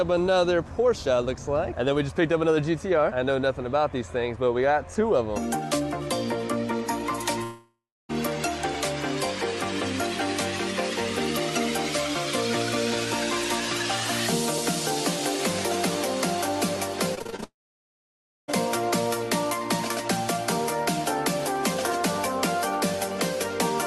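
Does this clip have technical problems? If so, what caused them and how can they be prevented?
Yes. The first fault is a long network dropout, at 7.43–8.11 s and again at 17.44–18.50 s. In each, roughly 0.66 s and then 1.04 s of audio never arrives. The receiver extends the last sound as a fading buzz, then falls to near-silence for about 0.29 s and about 0.95 s. Playback resumes with the missing section simply gone. The likely cause is a network outage or a stalled connection. Prevention: use a more stable connection, such as wired Ethernet instead of congested Wi-Fi, and prioritise call traffic with QoS.

The second fault is repeated packet loss, giving a robotic sound from 17.15 to 17.44 s, just before the second dropout. Seven short holes, the longest about 30 ms, fall in quick succession, and concealment patches them by repeating the preceding sound. About 45% of that stretch is synthesised, so it sounds choppy, with fragments missing. 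Prevention: reduce packet loss on the link and enable Opus in-band FEC with a larger jitter buffer.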